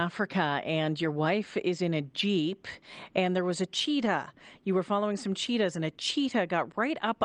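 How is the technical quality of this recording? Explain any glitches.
The call had two brief packet losses, each covered by a lost packet rebuilt from error correction, so there are two short rough patches rather than silent gaps. The audio came over an Opus call path whose top end stops around 12 kHz.

At 1.03 to 1.05 s, just before "wife is in a", a single 20 ms stretch went missing. At 4.01 to 4.07 s, right after "and there was a", about 40 ms dropped out, two packets' worth. In both places the next packet carried a lower-quality duplicate that the decoder played in place of the original, keeping the speech continuous but briefly grainier and noisier.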